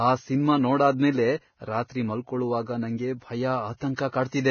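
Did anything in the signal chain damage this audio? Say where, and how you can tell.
Yes. The damage sits at the codec stage and runs through the whole speech clip. Nothing is audible above 6.6 kHz. The remaining treble is hissy and grainy, consonant attacks are smeared, and tonal parts sound rough. This is likely heavy Vorbis compression at a very low bitrate, somewhere under 20 kbps. At that setting the encoder lowers its cut-off and quantises the upper residue so coarsely that fine detail turns into noise of similar energy.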